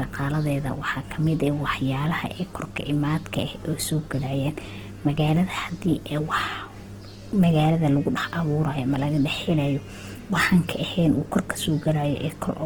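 The speech was likely squeezed through Opus compression at a very low rate for its whole length, and the sound points to the encoder's music (CELT) mode at something like 16 kbps. With too few bits, the encoder kept each band's energy but filled the detail with folded copies of lower bands and noise. Throughout, voiced sounds come out rough, grainy and hissy, and the damage is plainly audible, though the bandwidth stays full, reaching about 20.4 kHz.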